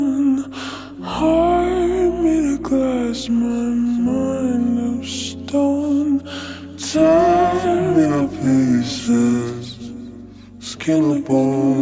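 From the first second to the end, the whole clip has a wrong sample rate fault. Everything runs at about 0.73 times its proper speed and sits roughly 5.5 semitones low, so the sound comes across slowed and dropped in pitch together, like a tape dragging. Speed and pitch move by the same ratio because the samples are being clocked out slower than they were captured, which fits 22 kHz material played back at 16 kHz with no conversion.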